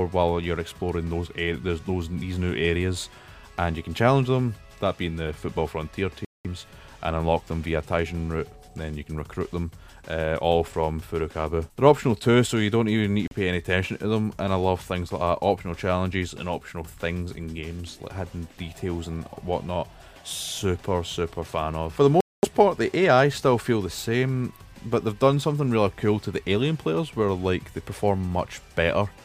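The audio drops out to silence three times. The gaps fall at 6.25 to 6.47 s, 13.28 to 13.33 s and 22.21 to 22.45 s. They last about 200 ms, 37 ms and 225 ms. Each one is a hard cut, and the sound then returns. This pattern points to a Bluetooth stall. Radio interference likely delayed packets to the headphones. Their buffer emptied, and playback paused until resent data arrived.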